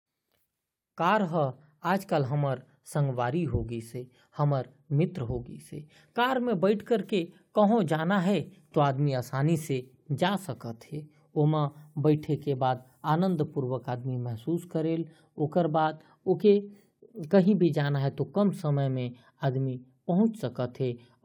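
No technical faults are audible.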